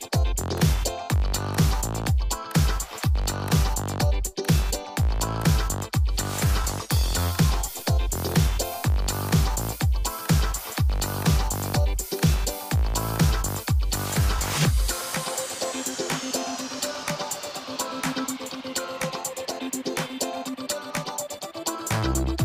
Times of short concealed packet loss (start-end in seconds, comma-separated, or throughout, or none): none